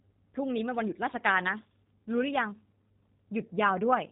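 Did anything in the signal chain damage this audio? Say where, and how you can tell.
Yes, at the codec stage, for the whole clip. The speech sounds rough and slightly synthetic, and nothing comes through above 3.8 kHz. That points to G.729 coding, which fits 8 kbit/s. It rebuilds speech from a vocal tract filter, pitch prediction and a few pulses per frame.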